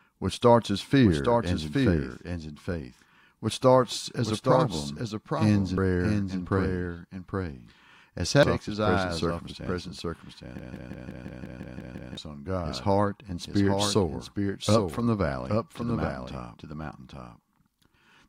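A speech recording carries a doubled audio track for its whole length: a second, full-band copy trails the original by about 0.7 s at about 5 dB lower. Unlike an echo or room reflection, this copy has no decay and no added room colour; it is simply the same signal laid in again, most likely through a second, slower capture path or two copies held out of step in an edit. Two brief blips mark damaged data in a compressed stream, one at 5.78 s between "as a problem ends" and "and praise", the other at 8.43 s just before "off his present circumstances". Each is the sound of a decoder misreading corrupted frames and resynchronising on the next header. From 10.59 to 12.17 s, after "off his present circumstances" and before "his heart and spirit", a broken-record loop takes over: a 174 ms fragment repeats exactly, back to back, nine times. The stuck repetitions distinguish it from the doubled track, which never repeats the same piece in a chain, and the audio that belonged in that span is missing. 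The likely cause is a stalled player, encoder or stream that kept sending its last buffered piece.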